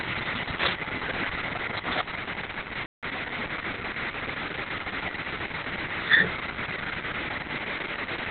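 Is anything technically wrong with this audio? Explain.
Yes, two problems.

Throughout, there's heavy Opus voice compression. Nothing comes through above about 4 kHz, so the speech sounds muffled, hoarse and a bit robotic, which fits a very low bitrate of around 6 kbps.

At 2.86 s there's a playback stall. The sound cuts to silence for about 170 ms, until 3.03 s, most likely because the player ran short of data.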